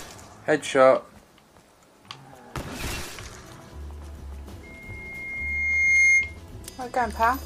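From 4.63 to 6.40 s there's loudspeaker feedback squeal: a 2.1 kHz tone swells over about a second and a half, ending roughly 10 dB above the sound.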